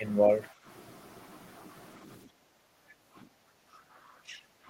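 At 0.51 to 0.65 s, and again from 2.28 to 3.29 s, the background is gated by the echo canceller. It clamped the microphone while the loudspeaker played, so room tone dips about 10 dB, then about 15 dB. The waveform's noise floor visibly narrows, and the spectrogram shows a faded band across all frequencies.

At 3.57 to 3.81 s and 4.23 to 4.44 s, the speech itself drops, deeply (around 30 dB), then more mildly (around 15 dB). The likely cause is speech suppressed in double talk, with the canceller muting the local talker during far-end activity. The waveform shows sudden envelope holes, and the spectrogram shows the harmonics thinning out.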